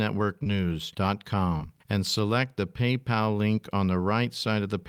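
Short concealed packet loss occurs twice in this speech. At 0.43 to 0.47 s, about 20 ms of audio arrived too late for the decoder, and the receiver covered the gap by extending the preceding sound, causing a brief smear. From 1.57 to 1.76 s, just before "and select the", another 20 ms went missing. The concealment filled 25 ms and then dropped 7 ms to rejoin the stream, which leaves a quick wobble.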